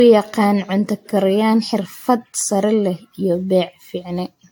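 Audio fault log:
Throughout: generation loss. The speech was likely decoded and re-encoded with AAC-LC around seven times, at rates that sound to be roughly 100 kbit/s. Each pass quantised again on a shifted frame grid, so the errors stacked up. The result is swirly, smeared and hollow, worse than a single encode at that rate would give. Consonant attacks are blurred, and nothing remains above 18.6 kHz.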